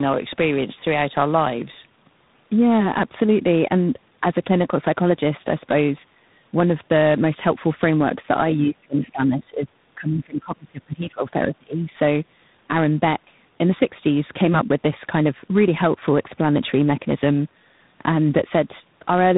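A speech recording carries tandem speech coding for its whole length: the audio passed through two low-rate speech coders in a row, with the second, G.726, re-coding the first one's already degraded output, so it sounds rough, muffled and warbly. A spectrogram shows a hard ceiling at 3.8 kHz and smeared, blotchy formant bands. From 9.05 to 9.10 s there is a brief scrap of the other side's voice leaking through, far quieter than the main talker. It is likely residual echo the echo canceller failed to remove, and it would appear as a faint, short patch of extra energy on the spectrogram with barely any trace on the waveform.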